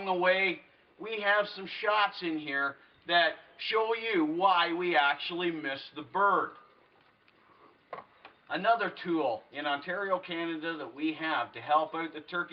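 No technical faults are present in the audio, which carries the band-limited character of a call path whose top end stops at about 12 kHz.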